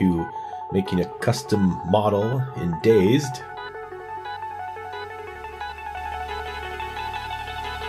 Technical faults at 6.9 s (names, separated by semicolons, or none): doubled audio track